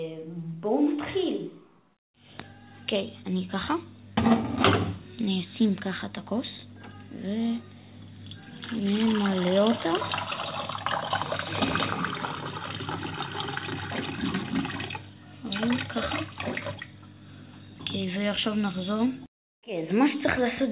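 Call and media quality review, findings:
No faults heard.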